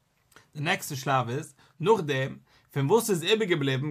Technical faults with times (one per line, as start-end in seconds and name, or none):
3.33 dropped samples